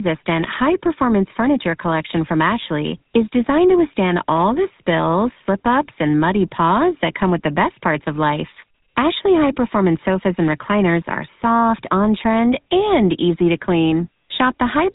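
The speech runs throughout through a GSM full-rate codec, pulse-driven vocal-tract modelling that fits 13 kbps, leaving nothing above 3.8 kHz and a plainly audible buzzy, gravelly roughness.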